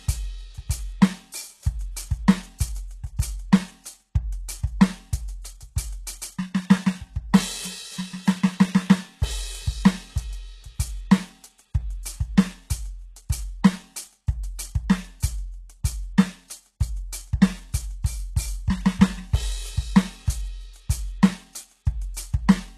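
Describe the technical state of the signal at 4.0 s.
At 4.0 s, as throughout the music, the treble sounds gritty and metallic, likely from HE-AAC compression at a very low bitrate near 16 kbps, with upper bands rebuilt from copied lower ones. A spectrogram shows a hard ceiling at 12.3 kHz and blocky, repeated treble patterns.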